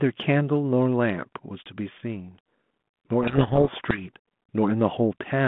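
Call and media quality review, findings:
Harsh, grinding distortion swamping the speech, 3.22 to 4.03 s. Codec payload misread at the G.726 decoder: code words arriving in reversed bit order, so each sample's difference is decoded wrong. Surrounding G.726 path sounds consistent with 32 kbit/s, light codec hiss, band limited to roughly 150 Hz to 3.5 kHz.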